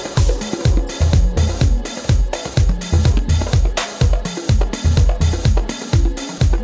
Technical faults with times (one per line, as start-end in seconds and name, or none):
0.14 sound dropped by the voice detector